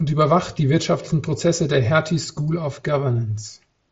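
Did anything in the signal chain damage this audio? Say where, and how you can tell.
No, nothing stood out on listening to this speech.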